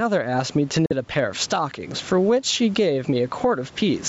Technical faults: gain pumping; Bluetooth dropout

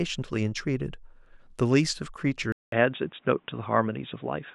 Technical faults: input switched to a poorer device

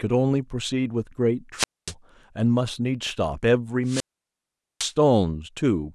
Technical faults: wireless microphone squelch dropout

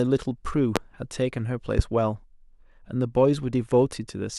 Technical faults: loud pop

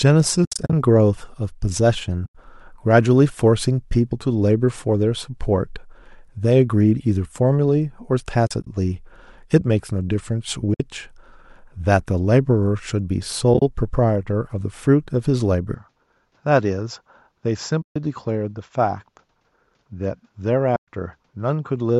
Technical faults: AAC frame loss with muting; input switched to a poorer device

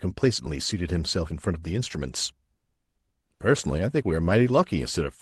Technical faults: lost packet rebuilt from error correction

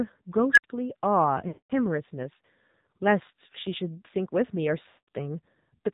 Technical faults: AMR narrowband mobile codec; unstable filter; lost AMR speech frames

